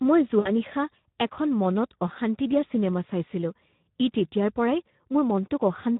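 A speech recording that sounds hoarse and grainy throughout, with a noisy, papery roughness on the voice. This is plainly audible Speex codec damage at about 11 kbps: the CELP coder has too few bits to describe the excitation, so it substitutes noise-like texture for the voice's natural buzz. From 0.39 to 0.51 s, just before "নিশা এখন মনত অশান্তি", the sound smears and fades. This is VoIP packet loss concealed by the speech codec. About 60 ms went missing, which fits three lost 20 ms frames. The decoder bridged the gap by extrapolating its last pitch and filter at falling gain, and the weakened state lingers briefly after real packets resume.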